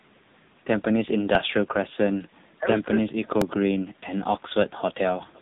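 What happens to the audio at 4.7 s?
At 4.7 s you're hearing the AMR narrowband mobile codec, which runs through the whole clip. It models the vocal tract with a few pulses per frame, so the speech turns buzzy and synthetic. The heavy damage fits a low rate around 6.7 kbps, and nothing gets through above about 3.8 kHz.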